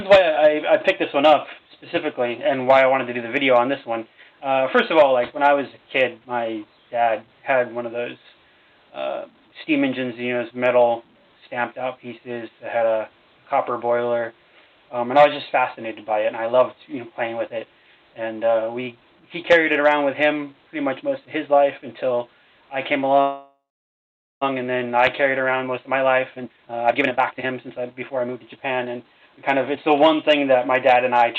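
From 23.21 to 24.43 s the sound stretches into a fading buzz, then about 0.8 s of silence: a call audio freeze, likely from delayed packets emptying the jitter buffer. From 25.25 to 29.9 s everything runs hurried at unchanged pitch, about 126% speed. This jitter buffer speed-up trims pitch-period slices, roughly a second in total, to shed the backlog.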